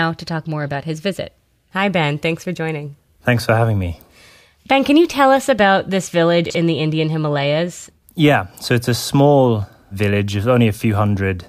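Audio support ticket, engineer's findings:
Chunks out of order, 6.46–6.55 s. Brief jumbled stutter in the speech with three hard joins. One chunk of about 46 ms plays one position late, after the chunk that should follow it. No audio lost, only reordered. Probable component: playback or write queue handing buffers over out of sequence.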